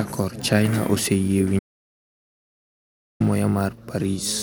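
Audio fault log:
1.59 to 3.20 s, audio dropout to silence: the speech cuts off mid-flow and about 1.6 s of silence follows, with no room tone at all, before it picks up again. The input was likely lost while the recorder kept writing silence.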